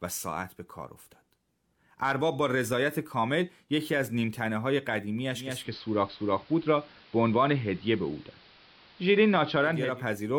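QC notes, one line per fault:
5.30–10.04 s: digital radio blending to analogue. The receiver loses the digital stream and cross-fades over about 0.45 s to the station's AM analogue feed, returning to digital at 10.04 s. AM carries a much narrower audio band, so the speech turns dull and muffled. A steady hiss floor sits roughly 30 dB below the signal, and the level shifts by about 2 dB at the switch.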